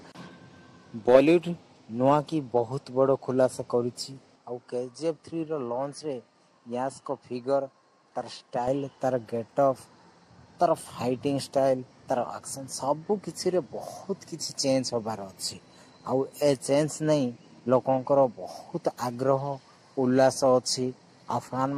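From 4.36 to 8.68 s the sound turns duller and a few decibels quieter, with no gap at either change, likely because the input switched to a poorer device. A spectrogram shows nothing above 10.5 kHz there, plus a faint new noise floor.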